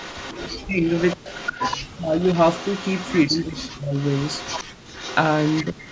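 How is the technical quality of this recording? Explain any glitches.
Technical quality is poor, with three kinds of call-processing fault running through the speech.

An echo leak is audible from 0.0 to 3.24 s and again from 3.93 to 5.91 s: a faint trailing copy of the speech about 123 ms behind, roughly 20 dB down at first, then nearer 15 dB down. It is likely a far-end loudspeaker echo that the echo canceller failed to remove fully and sent back.

Speech suppressed in double talk shows as the voice dipping sharply, by around 40 dB at worst, from 0.46 to 1.27 s, 1.86 to 2.2 s and 3.27 to 3.94 s, plus a shorter dip of about 35 dB from 5.64 to 5.81 s. The likely cause is that both sides spoke at once, so the canceller could not separate the talker from the echo and turned both down.

Background gated by the echo canceller appears from 4.65 to 4.91 s, where the room sound drops out by about 40 dB for a moment and then returns. 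The canceller clamped the microphone hard while the loudspeaker was playing and released it afterwards.

The call's microphone processing, with nothing above 8 kHz, is standard for a call path and not a fault.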